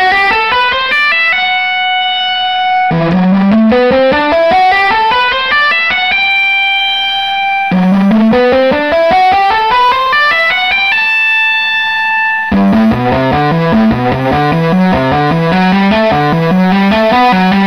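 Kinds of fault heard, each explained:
USB whine: a steady fixed-pitch whine creeps in at 6.78 s and stays to the end. That's current drawn in the bus's 1 ms frames leaking through power or ground, so it sits on 1 kHz, loudest at its 16 kHz multiple, roughly 35 dB under the audio.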